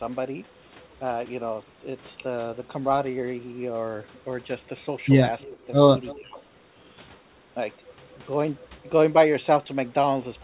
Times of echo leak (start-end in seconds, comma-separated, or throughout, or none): 5.40-5.49, 6.07-6.16